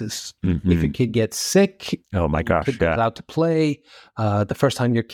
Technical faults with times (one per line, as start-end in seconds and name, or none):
none